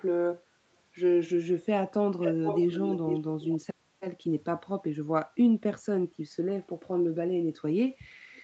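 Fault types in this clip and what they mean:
Echo leak: one side's echo canceller likely missed its loudspeaker pickup, so speech returns 447 ms late, loudest from 2.2 to 3.2 s.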